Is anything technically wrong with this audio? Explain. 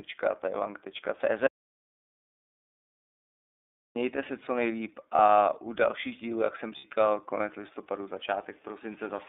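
Yes. The speech went through the iLBC codec, which fits its 13.33 kbps mode with 30 ms frames. Only a narrow line band of roughly 300 Hz to 3.6 kHz survives, and each frame's excitation is coded independently. The result is muffled, telephone-like speech with a plainly audible rough, synthetic edge.

From 1.47 to 3.96 s there is an audio dropout to silence. The input was most likely lost while writing continued as silence. About 2.5 s of sound vanishes into dead silence with no room tone at all, and speech resumes abruptly on "se co nejlíp".

Lost iLBC frames occur twice. The first is at 5.15–5.19 s, between "se co nejlíp" and "u dalších dílů jak". The second is at 6.78–6.85 s, between "dalších dílů jak jsem" and "konec listopadu". These gaps fit one and then two 30 ms frames. The decoder filled each one by repeating the last pitch cycle mixed with noise, so each gap is heard as a brief held, slightly buzzy vowel, and the voice is right again almost at once afterward.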